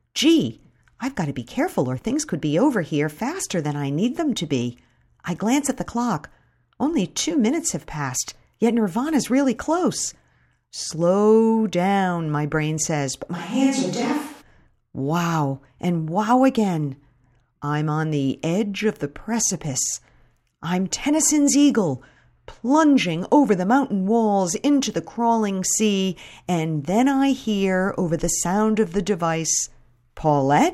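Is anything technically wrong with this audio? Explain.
Yes. From 13.37 to 14.40 s, just after "my brain says but", the sound becomes a switch to a distant microphone. The close pickup was likely lost for about a second, leaving a mic further from the talker. The tone turns hollow and roomy with thinner bass, and room noise sits roughly 30 dB below the speech, though the level barely changes. Unlike added reverb or a bass-cutting filter, the room character and noise arrive and leave abruptly.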